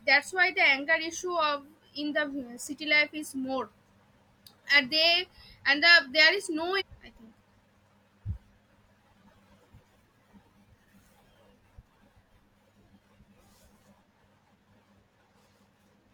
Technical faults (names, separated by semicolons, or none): stream segment skipped